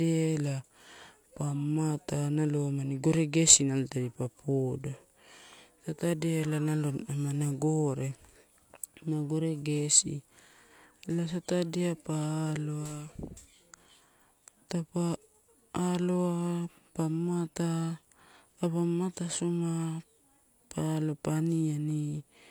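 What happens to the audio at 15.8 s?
At 15.8 s the speech carries the same smeared, swirly texture heard from start to finish, with a thin, synthetic sheen in the upper range even though content reaches 20.1 kHz. This is likely low-bitrate audio saved at a high bitrate. The sound points to an earlier pass through a low-rate codec such as HE-AAC around 48 kbit/s, then to MP3 at about 192 kbit/s. The larger file keeps those first-pass artefacts and cannot restore the detail that was already lost.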